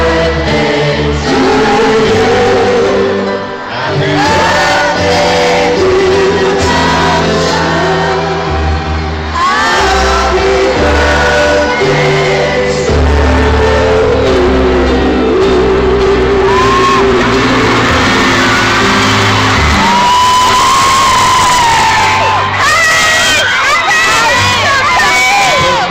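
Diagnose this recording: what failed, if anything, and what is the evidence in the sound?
Jitter buffer speed-up, from 4.43 to 6.44 s and again from 14.05 to 16.92 s, at the network receive stage. In the first stretch the sound runs about 6% fast, and in the second about 2% fast, both without any shift in pitch. That points to a buffer that had built up too much delay and was trimming it by cutting out short pitch-period slices over and over, around 150 ms in total the first time and roughly 50 ms the second.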